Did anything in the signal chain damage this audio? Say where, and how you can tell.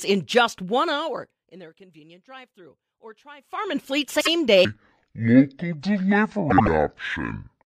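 Yes. Zipper noise runs from 3.35 to 3.78 s, a ticking that rides on the speech while its level moves by roughly 25 dB. The gain stage in the driver or buffer path is applying the change in unsmoothed 1 dB jumps, about 50 a second, and each jump clicks.

Frames out of order appear at 4.15 to 4.28 s and again at 6.50 to 6.68 s, each a brief garbled flutter. In network or storage delivery, two adjacent blocks were swapped before decoding, 52.2 ms each the first time and 78.4 ms the second, which fits runs of two and three codec frames. No time is lost.

A section at the wrong speed begins at 4.65 s and lasts to the end. The speech turns deep and slow at 0.552 times speed, roughly ten semitones down, with pitch and tempo shifting together. This is likely playback or an edit fitted to the wrong clock.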